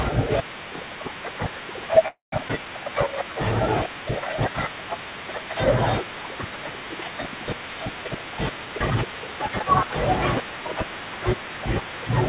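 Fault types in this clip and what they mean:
Call audio freeze: From 2.08 to 2.34 s the sound halts for 0.24 s. The last sound trails briefly, then about 0.15 s of silence follows before the audio resumes where it stopped, with nothing lost. The likely cause is packets held up in transit, draining the jitter buffer. Unlike a skip ahead, the freeze adds a pause rather than removing audio, so the timeline is stretched and nothing is cut.
Skip ahead: Around 2.48 to 2.51 s playback jumps forward, dropping roughly 70 ms of audio. The two sides are joined by a splice of only 9 ms, so there is almost no audible gap, just an abrupt discontinuity. Coming right after the freeze, it fits the receiver discarding surplus audio once the delayed packets arrive. It differs from a freeze because audio is missing, not paused.
Jitter buffer slow-down: From 2.84 to 3.34 s the audio runs at 88% speed. The receiver repeats single pitch periods and bits of pauses over and over, adding 65 ms in total. 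Sounds are drawn out while pitch stays the same, because whole periods are duplicated instead of the signal being resampled. A freeze inserts one block of trailing or silent fill, whereas this is a spread-out, repeated stretching.
Jitter buffer speed-up: From 8.06 to 9.86 s the audio plays at 113% speed. Short pieces of one or a few pitch periods are cut out repeatedly, removing roughly a fifth of a second overall, so the passage sounds hurried while pitch stays unchanged. Unlike a skip ahead, where one chunk vanishes at a single point, the trimming is spread across nearly two seconds, with no distinct jump.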